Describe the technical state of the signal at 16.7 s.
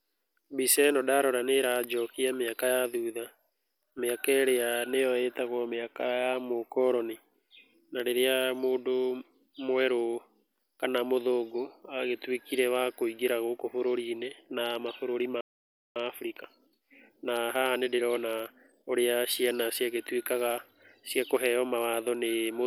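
At 16.7 s the speech is in a time-compressed catch-up, which runs from 15.96 s to 18.96 s. The player is draining a backlog left by a stall. It removes small slices of the signal and cross-fades across each join. Pitch stays normal, but delivery plays about 1.15 times faster than normal. The speech sounds hurried.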